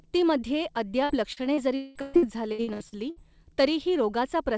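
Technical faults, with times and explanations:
1.04–3.19 s, repeated packet loss (robotic sound): packets kept going missing, leaving about eleven gaps up to 200 ms long. Each was patched by stretching the preceding sound, so about a third of this stretch is fill, heard as choppy speech with pieces missing.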